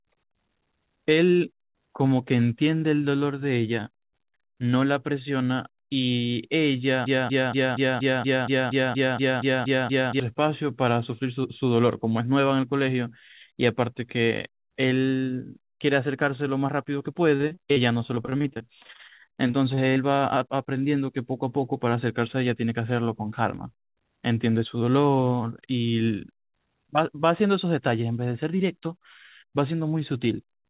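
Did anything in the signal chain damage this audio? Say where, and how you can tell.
Yes. A broken-record loop runs from 7.06 to 10.20 s: a 0.24 s fragment plays back to back, identically, about thirteen times, and the audio that belonged there never arrives. This points to a stall at the buffer or playback stage, likely a player or stream holding its last fragment.

Repeated packet loss (robotic sound) appears at the network stage from 17.36 to 19.98 s. Dozens of brief holes, none longer than about 36 ms, are patched by stretching the preceding sound, so roughly a fifth of that stretch is concealment, giving choppy speech with pieces missing.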